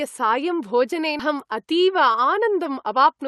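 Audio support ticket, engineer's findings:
Skip ahead, 1.19 to 1.21 s: roughly 0.7 s of speech gone, both sides spliced nearly directly with no fill. Probable component: jitter buffer discarding queued audio on overflow, or packets lost in transit while later audio waited. Waveform: abrupt envelope discontinuity, no silent gap. Spectrogram: formant tracks jump at a clean vertical seam.

Jitter buffer speed-up, 1.33 s to end: speech runs about 108% speed at unchanged pitch, sounds hurried. Probable component: jitter buffer over target, trimming one to a few pitch periods repeatedly to reduce delay, around 0.15 s total. Spectrogram: harmonics stay level, but syllables are compressed in time. Waveform: periods removed at many small splice points, each hard to see. Opus call path: coding noise, band limit near 12 kHz.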